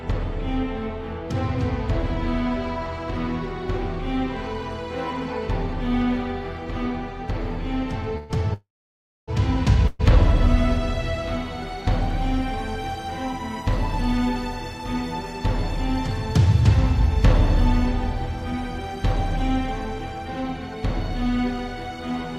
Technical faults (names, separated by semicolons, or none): call audio freeze